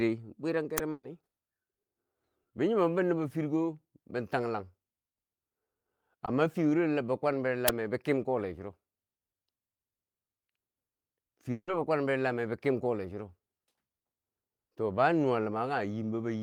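Right near the start, at 0.78 s, there's an uninitialised buffer: a tiny, loud crack of digital garbage. The player sent out a block before any audio had been written into it, so whatever was sitting in memory came out as samples. It lasts only about a millisecond, which fits a 64-sample block.

Almost straight after, from 0.91 to 1.05 s, comes a burst of packet loss. About 120 ms of audio never got played, and the receiver papered over it by carrying the last sound forward and letting it die away. You hear a held, fading smear, then roughly 10 ms of silence before the speech picks up again with that chunk gone.

At 6.25 to 6.29 s there's a short concealed packet loss, much subtler. Only about 20 ms went missing, and the decoder filled the hole by stretching out what came before and blending back into the real signal. It comes across as a quick little smear or wobble rather than a gap.

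The second uninitialised buffer hits at 7.68 s, just before "bi kem kole churo". It's the same kind of harsh burst as the first, about four times longer at about 5 ms, which points to a 256-sample block being played out before it was filled.

Last, from 11.51 to 11.69 s, just before "be kwan bero lameu", the sound carries on as a decaying tail for about 160 ms and then drops into roughly 50 ms of silence. After that the speech resumes, with that stretch simply missing. That pattern most likely comes from a long network dropout, where nothing arrived for a while and the receiver kept the last sound going until it ran out.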